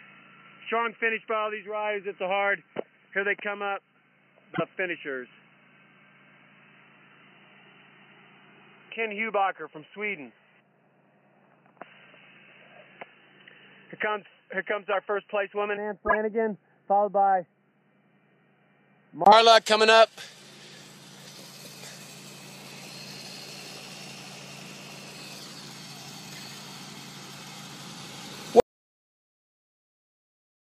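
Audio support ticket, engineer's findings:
Dull, boxy, band-limited sound from 0.0 to 19.26 s, with nothing above 3 kHz, level about 10 dB down and a faint added noise floor, then a brief gap of about 20 ms before full bandwidth returns. Likely cause: input switched to a poorer device, such as a headset call profile or an alternate microphone, that passes a narrow band and has its own gain and noise.

Short chirps and noise bursts at 4.54 to 4.60 s, 14.92 s, 16.06 to 16.17 s, 21.34 to 21.39 s, 24.50 to 24.60 s and 26.35 to 26.40 s. Each spans a few codec frames. Corrupt frame decoded: flipped bits in the bitstream made the decoder misplace energy in frequency.

Abrupt cut to dead silence at 28.60 s, with no room tone, lasting to the end of the file. Audio dropout to silence: the input was likely lost through a device disconnect, link failure or mute, and the recorder kept writing silence.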